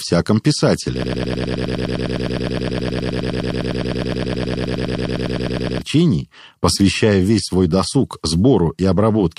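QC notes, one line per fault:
1.04–5.82 s, broken-record loop: A fragment of speech about 103 ms long repeats exactly, back to back, 46 times. The result is a rapid, machine-like stutter lasting nearly five seconds. The speech that belonged in that span never plays, so the sentence jumps ahead when normal audio resumes. The likely cause is a player, encoder or stream that stalled and kept resending the last short piece it held in its buffer.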